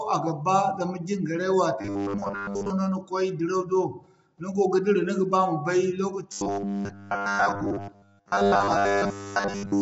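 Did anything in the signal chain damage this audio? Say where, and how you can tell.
Yes. Throughout the recording the speech sounds rough and grainy, with a hiss filling the gaps between the harmonics and nothing at all above 7.8 kHz. That points to the codec stage, likely low-delay AAC compression of the AAC-ELD kind used for video calls. Its short frames separate pitch harmonics poorly, and the damage here fits a starved bitrate of roughly 24 kbps. That forces coarse quantisation and a truncated top band.

From 1.81 to 2.70 s, just after "ba zama jingarey", and again from 6.32 s to the end, the speech turns into a rigid metallic buzz at 100 Hz that only loosely follows the syllables. This is robotic sound from repeated short buffers, likely at the driver or buffer stage. When fresh audio arrives late, the same 10 ms block is replayed, which sets the 100 Hz pitch. About 70 percent of the sound is repeats, and the real audio is skipped.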